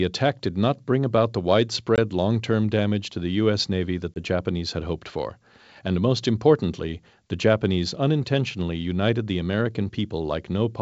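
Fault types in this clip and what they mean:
Packet loss on an ADPCM call: at 1.96–1.99 s, after "not bring about the", and at 4.14–4.19 s, a single 20 ms packet becomes hard-edged silence. The decoder's predictor and step size drift from the sender's, so speech resumes slightly distorted before settling.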